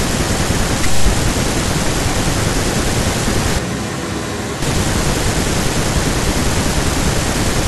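From 3.59 to 4.62 s the speech suddenly goes roomy and thin, around 5 dB quieter with more background noise, most likely a switch to a distant microphone before snapping back.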